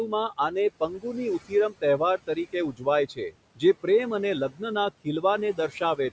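Right through the clip there are noise suppressor artifacts: the suppressor pulls the steady background down by about 18 dB, frame by frame, so the noise dips away in the gaps and comes back up under the speech.

The suppressor also mistakes bits of speech for noise. Between 0.08 and 3.84 s, before "પ્રેમ અને", scattered pieces adding up to something like 0.7 s get turned down by as much as about 17 dB. Then at 4.5 to 4.61 s, right after "પ્રેમ અને", and across 5.04 to 6.11 s, shorter stretches dip by about 14 dB. Those soft sounds and endings come out swallowed and faint.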